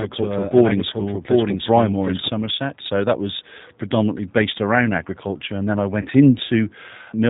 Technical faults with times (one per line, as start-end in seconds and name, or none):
0.00-7.30 G.729 codec
0.00-2.28 doubled audio track
6.01-6.11 VoIP packet loss concealed by the speech codec